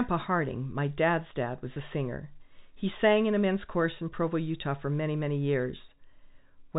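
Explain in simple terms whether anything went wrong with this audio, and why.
At 1.74 to 1.76 s the speech briefly holds a slightly buzzy tone: packet loss with pitch repetition, where about 20 ms went missing and the receiver repeated the last sound cycle to fill it.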